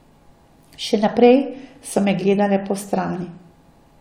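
No technical faults can be heard anywhere in the recording, with the signal holding steady from its opening moment to its close.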